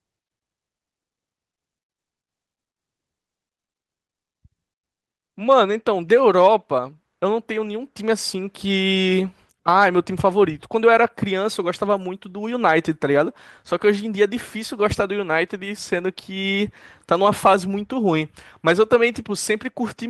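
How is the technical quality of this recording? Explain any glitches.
The recording has no technical glitches to report. There is nothing in the audio that calls for explanation.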